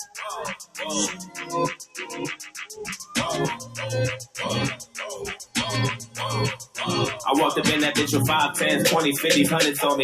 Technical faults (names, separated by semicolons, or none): noise suppressor applied to music or sounds; sound cut by the noise suppressor